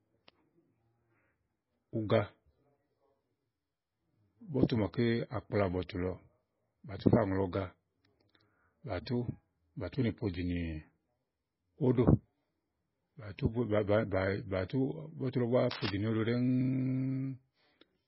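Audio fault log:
throughout: MP3 compression, likely near 16 kbps. The treble is gone above 5.6 kHz, and weak components flicker between frames, a watery swirl a plain low-pass lacks.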